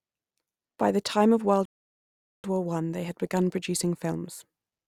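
At 1.65 s, right after "the time of", the speech drops into dead silence until 2.44 s, a rebuffering stall. The player simply ran dry of downloaded audio and had to sit and wait for more to arrive before carrying on. When it picks back up, it resumes at exactly the point where it froze, so nothing gets skipped. You just get roughly 0.79 s of extra gap stuck in mid-phrase.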